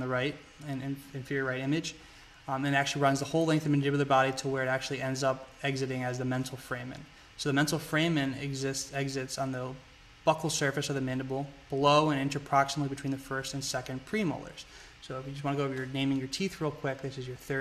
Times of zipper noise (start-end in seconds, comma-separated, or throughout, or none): none